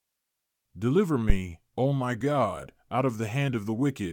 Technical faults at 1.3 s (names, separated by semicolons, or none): phantom power thump